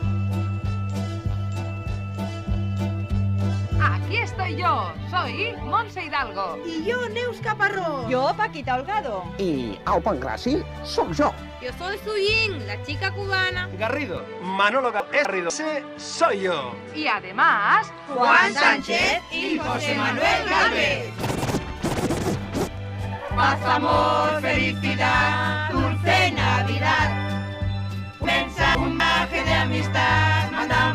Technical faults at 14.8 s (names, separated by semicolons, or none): input switched to a poorer device